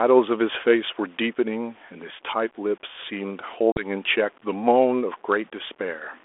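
Packet loss on an ADPCM call runs from 3.72 to 3.87 s. About two packets, some 40 ms of audio, vanish from this 32 kbit/s G.726 line (300 Hz to 3.5 kHz, lightly coded), leaving an abrupt silent gap. Because ADPCM sends only differences from an adaptive prediction, the receiver's predictor and step size drift out of step with the sender's, so the speech comes back slightly distorted before settling.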